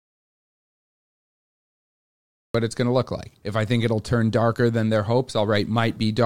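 The speech clip opens in dead silence, with no room tone at all, until about 2.55 s, when the voice starts abruptly mid-flow on "it's going to look". This is an audio dropout to silence, likely from a lost input while silence kept being written.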